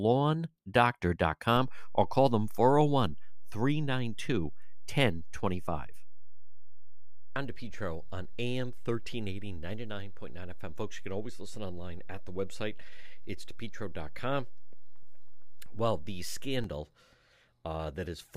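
A low thump at 1.56 s and a second at 16.64 s bracket a DC step. The speech carries on unchanged while the waveform's zero line jumps by about -31 dBFS, holds, then drops back, as when a converter recalibrates or an offset input is switched in.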